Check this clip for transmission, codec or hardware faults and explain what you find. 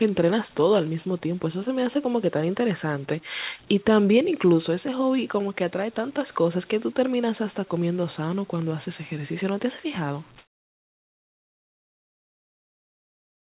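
One fault, in the final stretch of the clip. Comfort noise in place of the background runs from 10.38 s to the end, about 3.1 s. The real background, about 32 dB below the loudest speech, gives way to a steady, featureless noise about 6 dB quieter. The likely cause is discontinuous transmission: the sender stops once no speech is detected, and the receiver fills the gap with synthetic shaped noise. Throughout the clip nothing is heard above 4 kHz, which fits a narrowband call codec.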